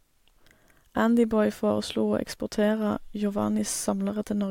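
No technical faults can be heard at any point in the recording.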